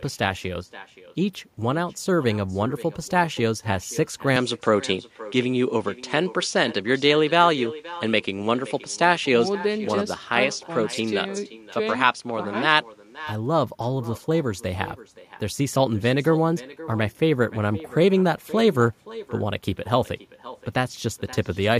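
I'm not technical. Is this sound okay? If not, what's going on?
No. Two things are wrong. First, an echo with no canceller: the other end seems to play the call through a loudspeaker that its microphone picks up again, and nothing removes it. Throughout the whole clip, the speech comes back about half a second later as a fainter, hollow copy.

Second, from 4.36 to 13.24 seconds, the sound turns duller, with the crisp top end trimmed away, then clears again. That points to the input likely being switched to a poorer device and then back. The changeover is seamless, with no gap or jump in loudness.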